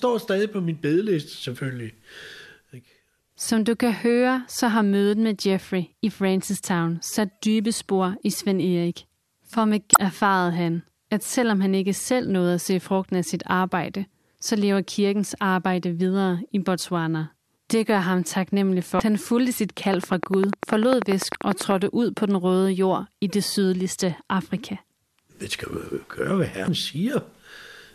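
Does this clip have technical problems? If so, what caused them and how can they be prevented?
Yes. Damaged data in a compressed stream causes short glitches at 9.93–9.96 s, before "erfarede han at selvom"; 18.97–19.00 s, after "gør ham taknemmelig"; 21.32–21.35 s; and 26.65–26.68 s. Corrupted frames make the decoder lose sync and skip ahead. Verify file integrity and use error-checked transfer or storage.

A train of clicks runs from 19.94 to 21.72 s, after "han fulgte sit" and before "ud på den røde". About twenty evenly spaced clicks arrive 10.2 times per second, roughly 15 dB above the speech. Likely interference from nearby equipment or a faulty connection. Shield cables and keep the recording chain away from noisy devices.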